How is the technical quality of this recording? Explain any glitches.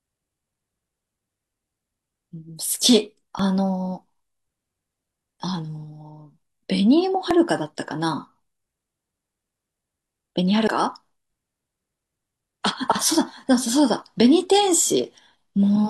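The recording has two kinds of timing fault: three small skips from overlapping stream segments and one larger gap between chunks.

Overlap between stream segments occurs at 3.39 s, 7.31 to 7.33 s and 11.18 to 11.20 s. The speech arrived in segments about 4 s long whose timestamps overlapped, so the player trimmed roughly 20 to 27 ms of speech that was never actually duplicated. The waveform jumps across the cut, and each one is heard as a brief click or tiny skip.

Audio missing between chunks is heard at 10.68 s as one abrupt skip. The speech jumps forward with no silence, and about a tenth of a second is gone. The likely cause is a recorder or processor working in 6 s chunks that dropped a short stretch while closing one chunk and opening the next, then spliced the two sides directly together. More is lost here than at the segment-overlap clicks.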